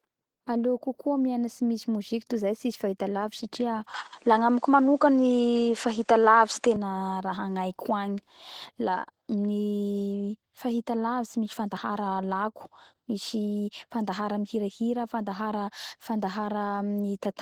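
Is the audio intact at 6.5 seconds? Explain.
No. At 6.5 s the sound falls inside a stretch from 3.94 to 6.76 s where the input likely switched to a poorer device. Content above about 9.9 kHz disappears, the level shifts by roughly 5 dB, and a faint new noise floor sits far below the signal. The sound turns duller, then clears again at 6.76 s with no gap at either switch.

Opus voice compression is also audible here, as it is throughout the clip. The damage fits a hybrid SILK/CELT coding at a low rate near 16 kbps. The coarsely coded excitation makes the speech sound hoarse and slightly robotic, even though the band reaches nearly 20 kHz.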